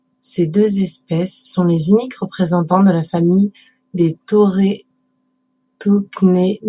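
Nothing in this speech recording points to a technical fault, so there's nothing here to flag.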